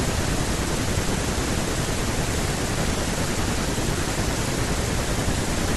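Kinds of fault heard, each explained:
Corrupt frame decoded: at 2.95–3.02 s, a few bit-damaged compressed frames were decoded anyway, spraying misplaced energy as a brief burst peaking around -15 dBFS.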